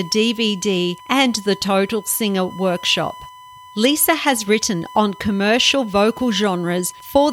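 A steady, fixed-pitch whine at 1 kHz runs under the speech for the whole clip, sitting roughly 20 dB below it. This is USB whine: the bus's 1 ms frame timing pulls current in bursts that leak into the audio through power or ground.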